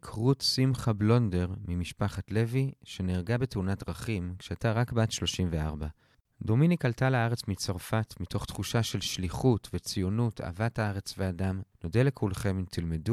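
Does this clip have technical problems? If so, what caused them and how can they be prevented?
No, there are no technical problems in this clip.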